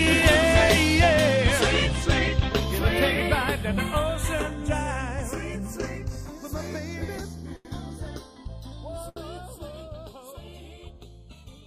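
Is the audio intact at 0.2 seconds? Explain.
No, channels drifting apart affects the whole clip: separate clocks, off by some 30 ppm, slide the inter-channel delay, sweeping comb notches in mono as slow flanging.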